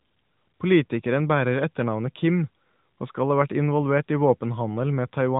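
No faults can be heard in the speech, which comes over an AMR narrowband mobile codec link at 12.2 kbps, so the band stops at about 3.8 kHz and the codec adds only light colouring.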